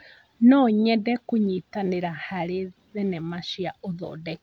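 Nothing here trips any alarm: the speech runs along without a single dropout, click, glitch or odd shift to point at.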